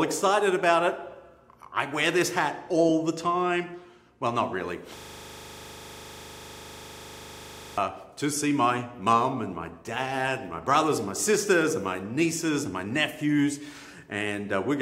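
A system hang loop runs from 4.97 to 7.78 s: the system froze while the sound hardware kept replaying its ring buffer, so one 40 ms slice repeats about 70 times, heard as a rapid, rattling stutter at 25 Hz, which fits a 40 ms buffer cycling unattended.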